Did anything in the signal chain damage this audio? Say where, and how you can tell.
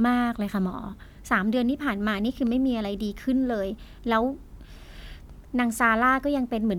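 No, nothing along the way seems to have damaged this speech, and I can't hear anything the chain has done to it.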